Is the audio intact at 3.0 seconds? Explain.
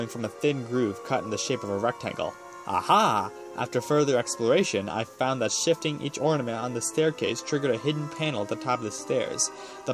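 Yes, the audio is intact at 3.0 seconds, with no dropout, click, distortion or other fault audible at that point.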